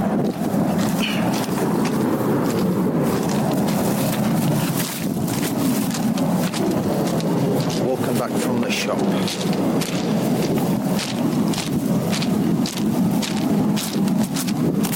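No technical faults can be heard anywhere in it.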